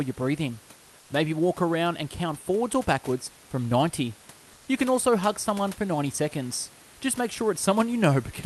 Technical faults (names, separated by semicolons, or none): comfort noise in place of the background